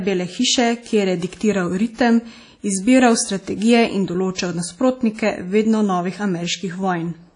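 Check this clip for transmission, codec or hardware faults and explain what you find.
Two codec faults show up in this speech recording, and the compression damage is plainly audible.

Across the whole clip there's a washy, ringing quality with hiss that swells and fades with the voice, and nothing at all above about 10.1 kHz. That points to WMA compression, likely the old WMA 1 encoder at a low bitrate around 32 kbps: long transform blocks smear the quantisation noise, and weak detail gets zeroed out.

At 4.35 to 4.38 s there's pre-echo: a short hiss lasting about 35 ms creeps in just ahead of a sharp onset, and the attack itself sounds soft and smeared. The noise for that loud block got spread into the quiet moment before it.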